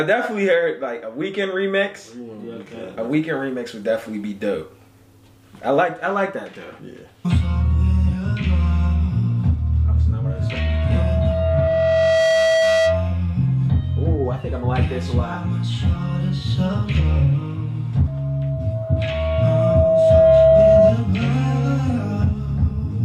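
At 10.25 s you get loudspeaker feedback squeal: a steady tone around 648 Hz creeps up over a couple of seconds and sits a bit above the sound before dropping out at 13.22 s. The mic is hearing its own speaker, and at that one frequency the loop gain tips past unity, so the tone feeds itself. It comes back at 18.07 s, same pitch, same slow swell, but noticeably louder this time, until 20.98 s.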